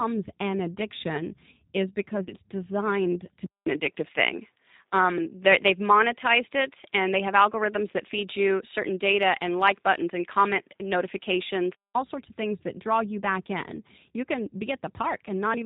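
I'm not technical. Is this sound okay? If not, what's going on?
No. The whole recording sounds slightly rough, thin and synthetic, with no crisp top end. That is the G.729 codec, a low-rate phone-call format that rebuilds speech from a simplified model of the voice and drops all the higher frequencies, so the damage is plainly audible.

Around 2.24 to 2.31 s, just after "an addiction is because" and before "designed to", the voice briefly smears into a buzzy or noisy, fading sound. That is VoIP packet loss concealed by the speech codec: about 30 ms of data went missing, and the decoder guessed the gap by stretching the last bit of voice and fading it out.

From 3.46 s to 11.95 s, between "designed to" and "sorts of things that", the voice turns duller and more muffled, with a short silence of about 0.2 s at the start and a small change in loudness. The likely cause is an input switched to a poorer device, such as a different microphone or a headset in call mode, which carries even less of the high range and sounds different.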